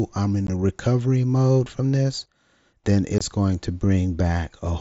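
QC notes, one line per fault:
0.47 s and 3.18–3.21 s, unconcealed Bluetooth headset packet loss: the speech drops out abruptly, for about 15 ms and then about 22 ms. Short headset voice packets went missing and nothing filled them. This happens over the wideband mSBC link.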